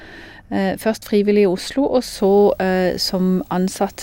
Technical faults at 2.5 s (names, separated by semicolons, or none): video or display buzz